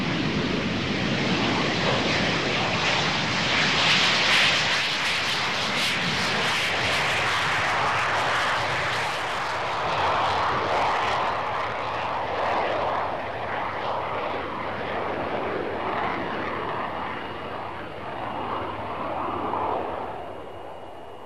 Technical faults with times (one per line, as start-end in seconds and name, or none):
0.00-21.25 MP2 compression